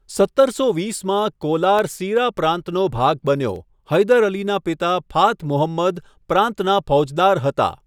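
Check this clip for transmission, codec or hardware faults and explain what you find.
One fault is present. From 1.79 to 3.56 s, after "સત્તરસો વીસમાં", CD scratch ticks occur: a disc blemish overwhelms error correction each revolution, producing seven tiny ticks of a few milliseconds and of uneven strength.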